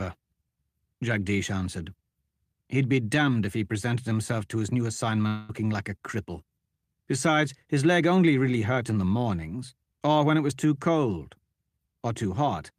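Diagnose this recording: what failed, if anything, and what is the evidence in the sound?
At 5.27 to 5.51 s, after "himself to his new", a fading buzz replaces the speech. Likely a long network dropout. Receiver concealment covered 0.22 s of missing audio.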